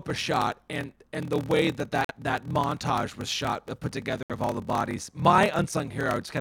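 Throughout the speech, a block size mismatch (padded) means one stage writes blocks of 1024 samples while the next reads larger ones, and the leftover space in each is zero-filled. The inserted gaps produce a steady buzz at 38.3 Hz, and everything runs slower at 0.889 times normal speed with pitch roughly unchanged.

At 2.05 to 2.11 s, between "and the way that" and "that montage was shot", a corrupt frame was muted: the decoder rejected damaged compressed data and silence replaced it. The abrupt 68 ms hole fits two lost frames. A second muted gap of 88 ms, at 4.23 to 4.32 s between "was shot uh put" and "of all the bodies", fits three frames. Timing holds across both.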